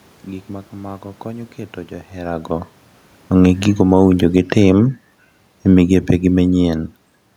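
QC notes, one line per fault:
3.65–7.12 s, automatic gain falling: the speech and room noise sink together by about 5 dB. The gain control judged the input too loud, or its background noise too strong, and gradually lowered its gain.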